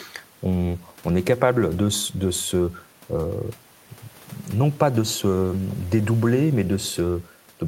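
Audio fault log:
No faults are audible anywhere in this speech recording.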